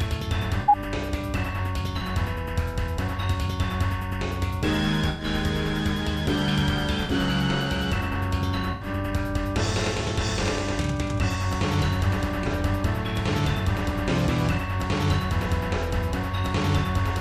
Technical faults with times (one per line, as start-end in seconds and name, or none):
0.61-0.76 corrupt frame concealed
1.98-2.02 corrupt frame concealed
5.09-5.25 corrupt frame concealed
7.04-7.11 corrupt frame concealed
8.71-8.87 corrupt frame concealed
12.43-12.51 corrupt frame concealed